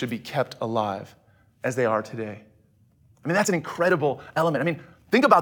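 Right after "I mean", at about 3.36 s and running to the end, there's a time-stretched section: the speech suddenly runs about 1.45 times faster while the pitch stays put, so it comes across rushed. That's likely software squeezing the audio by dropping short pieces.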